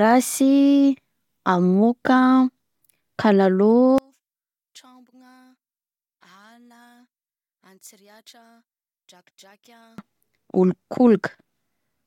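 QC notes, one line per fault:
3.98 to 9.98 s, one channel inverted: for these six seconds the speech almost disappears when heard in mono, dropping by about 34 dB and leaving only a faint trace. That's the classic sign of one stereo side having its polarity flipped, which is the likely cause here. The centred voice is identical in both channels, so summing them cancels it, and only the slight difference between left and right remains.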